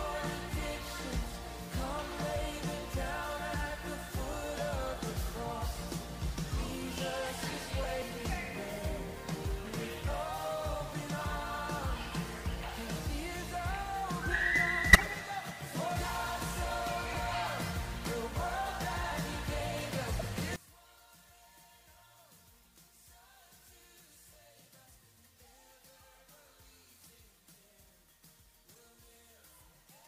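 Brief chirps and bursts of noise at 2.30, 3.76, 7.83, 9.14, 14.93, 17.12, 20.12 and 28.70 s are corrupt frames decoded: damaged data misplaces energy across frequencies. By contrast, sudden jumps forward at 8.02, 15.96, 19.12 and 25.17 s each skip roughly a tenth of a second, likely dropped buffers from an overrun. From 20.56 s to the end, the mono sum falls by about 24 dB to a faint residue, pointing to one channel inverted. The centred content cancels, leaving only the difference between channels.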